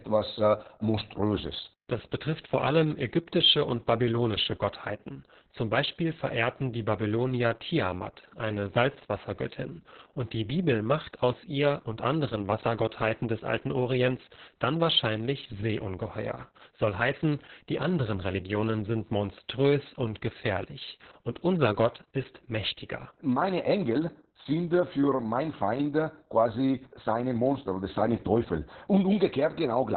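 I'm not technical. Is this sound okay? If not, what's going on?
No. Throughout, heavy Opus voice compression makes the speech muffled, with nothing above about 4.3 kHz. Unlike plain muffling, it also sounds hoarse and slightly robotic.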